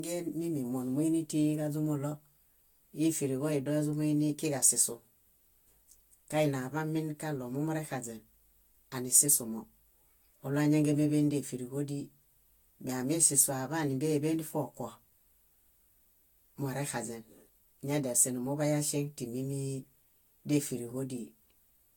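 Throughout, the speech sounds swirly, hollow and smeared, with blurred consonant attacks and nothing above 18.8 kHz: generation loss, likely from about five successive Vorbis encodes near 68 kbit/s.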